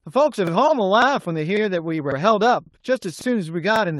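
A speech clip with overlapping chunks. About 48 ms repeats at 0.47, 1.02, 1.57, 2.12, 3.21 and 3.76 s, stuttering where each half-second chunk restarts early. At 1.77 s, a lost packet rebuilt from error correction sounds briefly rough and noisy for 20 ms, which fits one packet replaced by its low-bitrate copy.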